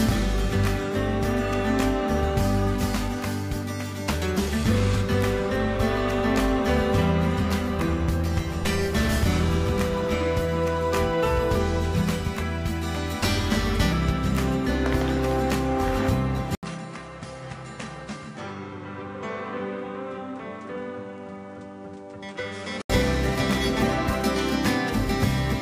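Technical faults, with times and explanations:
16.55–22.90 s, input likely switched to a poorer device: an 80 ms gap, then a smaller waveform about 10 dB down, spectrogram empty above 10.6 kHz, and fresh background noise.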